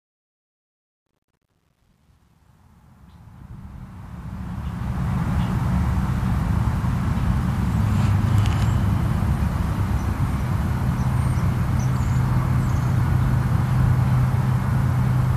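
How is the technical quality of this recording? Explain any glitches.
The recording has one clear glitch: truncation distortion on the fade-in. It runs from 0.00 to 5.33 s and is worst from 0.00 to 3.59 s. The fade rises from the very start and the distortion ends at 5.32 s. The fade stage drops its low bits without dither, which fits a 10-bit stage. At low gain the waveform collapses onto a few coarse steps. The quiet opening sounds gritty before the level climbs.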